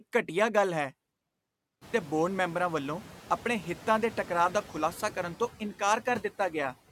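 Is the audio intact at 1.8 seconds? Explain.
No. A system hang loop runs from 1.32 to 1.94 s, after "ਘਟੀਆ ਗੱਲ ਹੈ". The hardware kept replaying one 5.33 ms piece, which fits a 256-sample buffer. The result is a steady buzz at 188 Hz.

Noise suppressor artifacts are also present here. The background noise is pulled down by about 14 dB and pumps around the sound.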